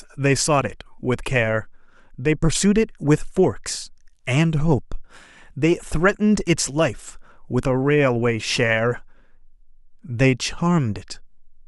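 No technical faults can be heard anywhere in this speech recording. There is no moment that stands out as a defect.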